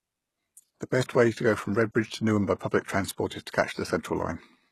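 HE-AAC compression, throughout the clip: the speech has nothing above 12.3 kHz, and the treble that remains sounds synthetic, with s sounds turning gritty, metallic and lispy. The damage is plainly audible and the likely cause is HE-AAC at a very low rate, roughly 16 kbps. The codec encodes only the lower spectrum and fills in the top by copying lower bands upward under a coarse envelope, so the upper harmonics no longer line up with the real ones.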